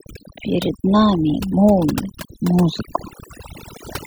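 It's a speech clip, and it suffers from overdone noise removal from start to finish: the denoiser is clamping down so hard on bands near its noise estimate that the background drops and breaks up into twinkly specks, and quiet parts of the voice go with it.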